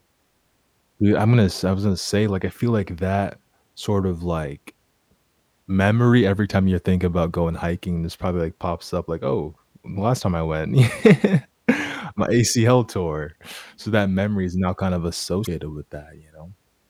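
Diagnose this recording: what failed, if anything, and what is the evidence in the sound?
The failure is damaged data in a compressed stream, at the codec stage. Just after "is now kind of", a brief glitch sounds from 15.43 to 15.47 s: corrupted bytes made the decoder misread those frames, lose sync and resume at the next valid frame header.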